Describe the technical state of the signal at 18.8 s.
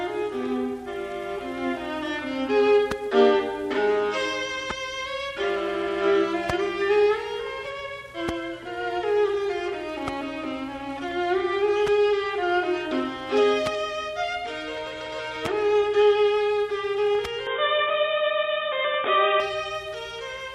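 At 18.8 s the signal is band-limited and boxy. From 17.47 s to 19.40 s nothing passes above about 3.8 kHz, the level shifts by roughly 5 dB, and a new noise floor sits around 30 dB below the signal. The change is abrupt, with no gap at the transition. This pattern points to an input switched to a poorer device, likely a lower-grade microphone or a headset call profile, whose narrow passband and own noise replace the original path.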